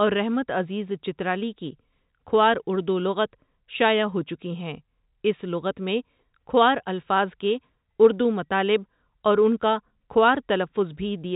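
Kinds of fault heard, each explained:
No faults found in this speech; the band limit, with nothing above 3.8 kHz, comes from the normal G.711 telephone path and is not a defect.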